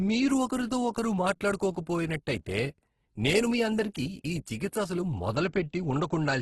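Across the whole clip the speech sounds rough and grainy, with a fizzy, noise-filled texture on voiced sounds and nothing above about 12.1 kHz. The likely cause is heavy Opus compression in its CELT mode, consistent with a bitrate near 12 kbps: band energies are kept but starved bands are filled with folded or noise content. Unlike MP3 damage, there are few swirling, watery holes in the spectrum; the grain takes their place.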